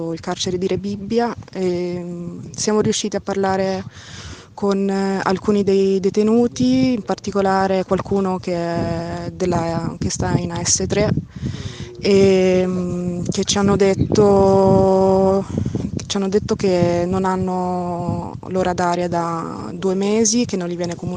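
Nothing in the audio stood out as a technical problem on listening.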